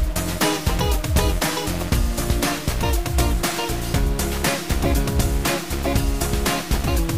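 From start to finish the audio carries a harsh, buzzy distortion that follows the waveform rather than its peaks, and the quiet gaps fill with a steady noise bed instead of falling silent. This points to a stuck bit, likely a single data bit held at one value, throwing about half the samples off by a fixed step of roughly -35 dBFS. Clipping only roughens loud passages, and reduced bit depth sounds grainier without this noise in pauses.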